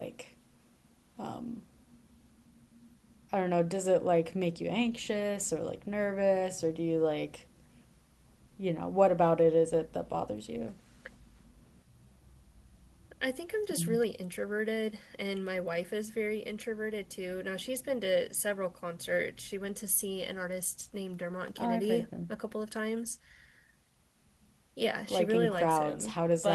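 No technical faults are audible anywhere in the recording.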